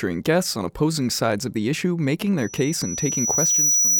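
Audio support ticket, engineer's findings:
Loudspeaker feedback squeal from 2.38 s to end of clip. Pure tone at 5.9 kHz, swelling over roughly a second and a half to a few dB above speech. Mic hearing its own speaker; loop gain above unity at that frequency.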